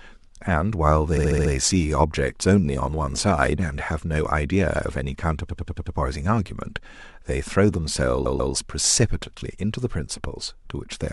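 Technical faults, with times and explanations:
1.16–1.51 s, repeated frames: a 70 ms block plays five extra times, a rapid stutter, adding about 0.35 s.
5.48–5.95 s, repeated frames: a 93 ms block recurs five more times, adding about 0.46 s. Unlike an echo, each copy is identical with no decay.
8.25–8.52 s, repeated frames: a longer 139 ms block plays twice more, adding about 0.28 s.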